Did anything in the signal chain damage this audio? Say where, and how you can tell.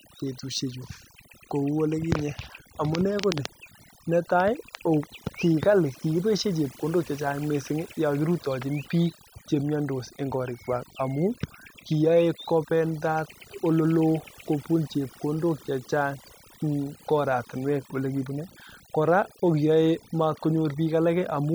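Yes, the damage comes from overdone noise removal at the call processing stage, and it runs through the whole speech clip rather than hitting at any one moment. The gaps between phrases drop to near silence with little twinkling specks. That's a suppressor pushed too hard: it's pulling individual frequency bands right down whenever they sit close to its noise estimate, and the quieter parts of the speech get dragged under with the noise.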